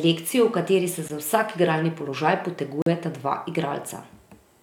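A speech clip with two brief dropouts to silence, each a Bluetooth stall, likely from interference holding back packets until the headphones' buffer emptied. The first, at 1.09 s between "kateri se" and "za vsak igralni položaj", lasts about 13 ms. The second runs from 2.82 to 2.86 s, about 44 ms, right after "za vsak igralni položaj". On a waveform each shows as a flat gap; a spectrogram shows a clean vertical blank band across all frequencies.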